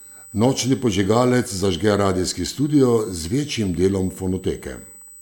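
A steady USB whine runs under the speech for the whole clip. It sits at a fixed pitch of 8 kHz, with its energy centred there. The tone matches the 125 microsecond microframes of a USB bus. Current drawn in that rhythm has leaked into the audio through shared power or ground. It sounds like a thin, high, constant squeal, roughly 25 dB below the speech.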